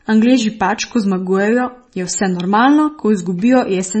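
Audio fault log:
Throughout, MP3 compression, likely: nothing above 8.3 kHz, plus heavy watery swirling on speech that a plain low-pass wouldn't cause, which fits a very low bitrate near 25 kbps.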